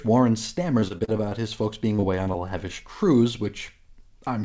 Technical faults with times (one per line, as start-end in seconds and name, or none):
0.80-1.41 repeated packet loss (robotic sound)
1.96-2.36 repeated packet loss (robotic sound)